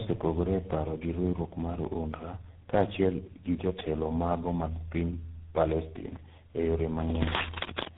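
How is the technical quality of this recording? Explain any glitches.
Quality is poor throughout: the speech has been through several speech codecs in turn, and nothing is present above 3.8 kHz. The damage sounds like tandem speech coding, consistent with G.723.1, then G.726, then GSM full rate, joined by G.711 links. Each coder re-encodes the previous coder's errors, so the artefacts compound. The voice is rough, muffled and warbly across the whole clip.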